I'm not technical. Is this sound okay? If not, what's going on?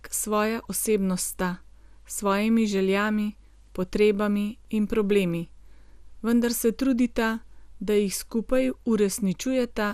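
No. Throughout the speech, the sound is dull and has a gurgling, grainy roughness. Nothing above 15.1 kHz comes through. This is likely MP2 compression, which saves space by shutting off the upper parts of the sound and storing the rest coarsely.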